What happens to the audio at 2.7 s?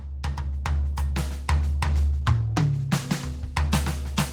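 At 2.7 s the music is inside a call bitrate drop running from 1.86 to 3.52 s, with the encoder's budget cut from 32 to 18 kbps. The coarser coding leaves the music rough and watery.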